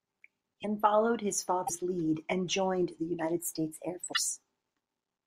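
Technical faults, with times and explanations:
0.62–0.65 s, 1.66–1.70 s and 4.12–4.17 s, broken MP3 bit reservoir: the speech skips forward and each cut ends in a brief garbled glitch lasting about 30 to 60 ms, roughly one to two frames of 26 ms. The likely cause is missing frames: the next frame reaches back into the reservoir for data borrowed from earlier frames, finds bytes belonging to another frame, and decodes wrongly before recovering.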